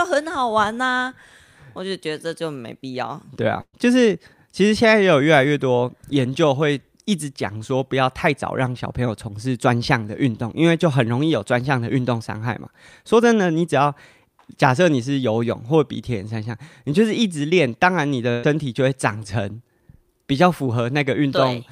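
At 3.61 s and again at 18.31 s the speech hits a burst of packet loss, each about 120 ms gone. The receiver stretches the last sound into a fading buzz or hiss, trailing into about 40 ms of silence the first time, then jumps ahead.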